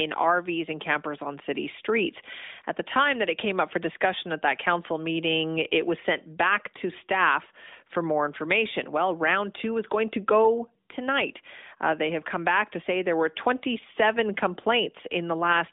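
There are no technical faults to describe in this speech, so there is nothing to set out in time order.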